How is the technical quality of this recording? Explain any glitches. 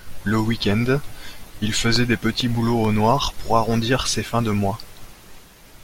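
The recording has one glitch, a burst of CD scratch ticks. Between 1.96 and 2.85 s, seven short ticks cut through the speech at a steady rhythm of roughly eight per second, the longest lasting only a couple of milliseconds. A scratch on the disc destroyed more data than error correction could rebuild, once per revolution, so the player patched or muted those samples. On a spectrogram they appear as evenly spaced thin vertical lines; in the waveform, as tiny notches or flat spots.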